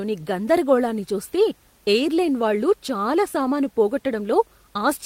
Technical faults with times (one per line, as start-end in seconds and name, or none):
none